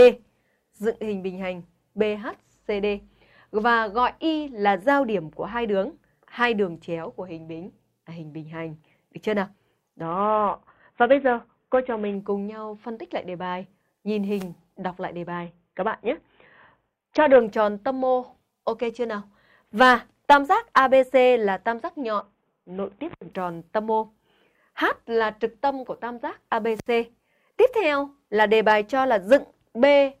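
Three Bluetooth SBC bit pool drops occur, at 10.02 to 12.15 s, 15.32 to 17.41 s and 22.21 to 23.33 s. Each time the treble dulls and gritty noise rises, pointing to the link's bit pool falling from about 28 to 5, roughly 54 kbps. Starved upper sub-bands empty out while the rest are coarsely quantised. A spectrogram shows the high band vanishing in sharp-edged blocks, with speckled noise filling the lower bands until full detail returns.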